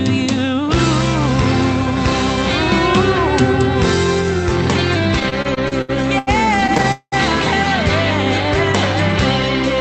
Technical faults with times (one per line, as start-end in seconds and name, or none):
5.19-6.86 repeated stalls (stutter)
6.92-7.14 call audio freeze